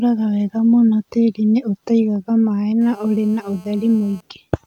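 From 2.81 to 4.21 s, GSM phone buzz cuts in. A nearby 2G phone transmits in call bursts at 217 Hz. The audio circuit rectifies them into a hard, raspy buzz about 30 dB below the speech.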